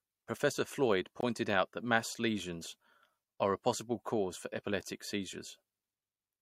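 At about 1.21 s the speech drops out for roughly 20 ms: a gap between stream segments. The timestamps of two adjacent segments, which fits a segment length of 2.0 s, do not meet exactly, so the player inserts silence to cover the short hole in the timeline. It sounds like a brief hard-edged cut in the speech, abrupt at both ends rather than faded. No speech content is lost; the material after the hole arrives roughly 20 ms late.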